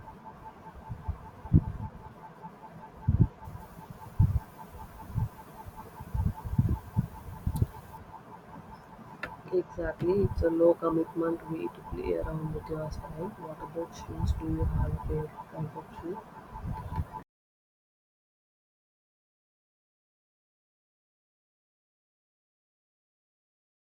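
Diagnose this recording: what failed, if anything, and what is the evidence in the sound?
Between 3.45 and 7.98 s the speech turns thin, bright and sibilant, a sign of pre-emphasis left on. The treble rise follows the FM 50 µs curve, about 10 dB up at 10 kHz relative to 1 kHz, so the receiving or playback stage skipped the matching de-emphasis.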